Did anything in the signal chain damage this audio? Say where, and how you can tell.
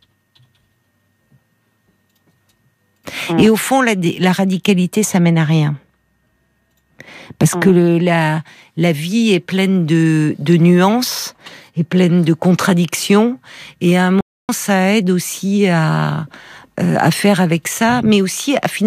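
Yes. At the playback stage, the speech stops dead at 14.21 s and stays silent for about 280 ms before resuming at 14.49 s. This is likely a playback stall, where the player ran short of data or was blocked. Unlike a brief packet-loss dropout, it is a single long gap.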